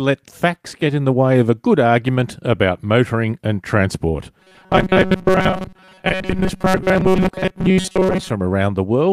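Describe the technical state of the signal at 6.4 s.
At 6.4 s the signal is in the middle of robotic sound from repeated short buffers, running from 4.40 to 8.31 s, just after "about motoring and transport". The likely cause is audio arriving too slowly, so the playback side fills the gaps by looping the last few milliseconds and skipping much of the real signal. The loop imposes a steady buzz near 188 Hz, which fits a repeated chunk of about 5.3 ms, and the speech turns into a hard, metallic drone that only loosely tracks the words.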